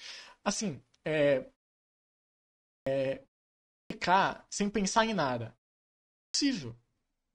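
Speech resumes abruptly at 2.5 s, 3.51 s (just before "sem pensar em nada") and 6.0 s, each onset swallowed by 0.34 to 0.39 s: a clipped start after a pause, as the sleeping output device wakes late.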